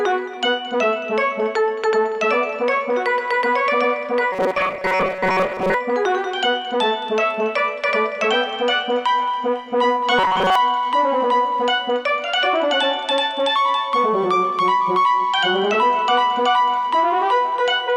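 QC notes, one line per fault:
4.32 to 5.74 s and 10.19 to 10.55 s: robotic sound from repeated short buffers. The sound turns into a rigid metallic buzz pitched at 188 Hz that roughly follows the original contour. This is likely from new audio arriving too late, with a fragment of about 5.3 ms replayed over and over while most of the real material is skipped. Unlike a dropout or stutter, the gaps are filled by this steady buzz rather than by silence or audible jumps.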